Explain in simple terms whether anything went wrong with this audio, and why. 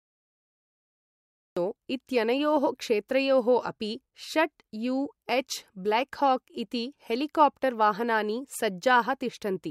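The speech has a cut-off start: the first 1.57 seconds are dead digital silence, then the sound begins abruptly in the middle of speech, with no natural build-up. The recording or stream began late, so the opening of that sound was never captured.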